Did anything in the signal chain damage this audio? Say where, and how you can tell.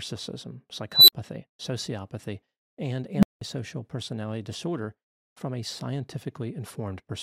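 Yes. An unstable filter in the processing stage twice rings into a growing tone: around 4 kHz from 0.92 to 1.13 s, swelling over 161 ms before "sociopathy and", then dropping out for 46 ms; and around 200 Hz from 3.14 to 3.41 s, right after "sociopathy and", swelling over 92 ms and then going silent for 186 ms before "personality disorder from a". On the waveform each event is an exploding envelope that clips, flat-tops, then drops to silence. On the spectrogram it is a single bright horizontal line that intensifies and then ends in a blank gap. Bad coefficients let the recursive feedback grow each sample until the numbers overflow and the filter resets.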